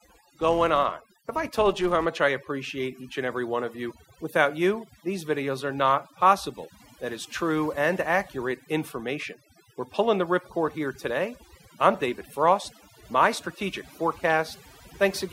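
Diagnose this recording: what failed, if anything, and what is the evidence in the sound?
Two things went wrong here. The first one, running the whole way through, is overdone noise removal at the call-processing stage. The background drops and breaks up into little twinkling specks. That's a suppressor set too hard. It's slamming individual frequency bands down whenever they sit near its noise estimate, and the quieter parts of the voice are getting swallowed along with the noise.

The second is a filter restarted on every block, from 0 to 2.06 s, clearing just before "I appreciate each and". There's a steady buzz at 375 Hz riding on the speech and rising and falling with its level, which fits a 128-sample processing block. That points to the driver or buffer stage. Some filter there is dropping its state between blocks and starting each one cold from silence, so every block boundary kicks off a tiny transient.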